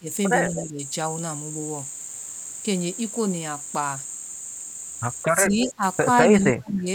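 The speech dips sharply from 0.0 to 0.09 s, by about 20 dB, then again from 0.68 to 0.81 s (about 15 dB), from 5.27 to 5.83 s (about 20 dB) and from 6.38 to 6.87 s (about 30 dB, nearly cutting out). This is speech suppressed in double talk: likely the echo canceller turned down the talker along with the far-end echo while both sides spoke at once.

At 0.47 to 0.61 s and 5.49 to 5.68 s, a faint delayed copy of the speech trails it by 204 ms and 207 ms, about 15 dB below the main level. This is echo leak, likely loudspeaker sound the far end's canceller failed to remove and sent back.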